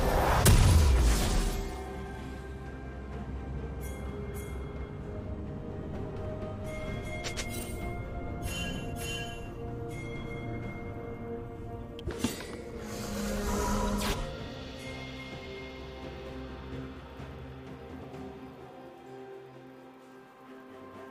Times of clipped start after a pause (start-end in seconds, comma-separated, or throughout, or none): none